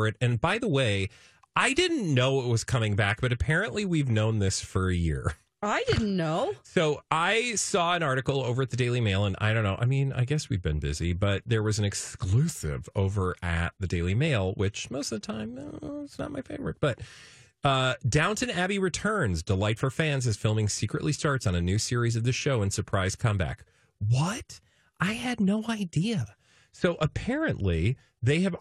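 From 24.39 to 26.21 s the speech runs 5.2% fast and 88 cents sharp, then snaps back to normal. This is most likely a drift correction step, with clock-matching software jumping the playback rate to rebalance its buffer. Unlike wow, the pitch holds steady during the shift rather than wavering.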